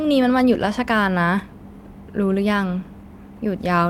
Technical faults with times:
none

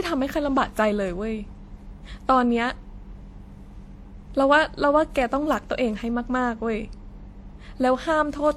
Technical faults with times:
0.00-8.56 transcoding between lossy codecs

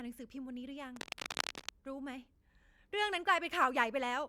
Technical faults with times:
0.96-1.69 cable scratch noise

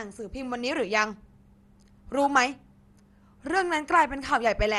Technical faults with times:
0.00-4.79 MP2 compression

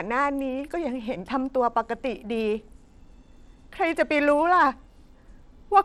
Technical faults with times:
0.00-5.84 Bluetooth SBC compression

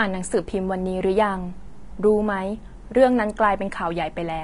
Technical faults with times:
0.00-4.44 Vorbis compression

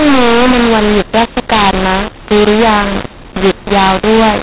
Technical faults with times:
0.00-4.42 mu-law and A-law mixed up

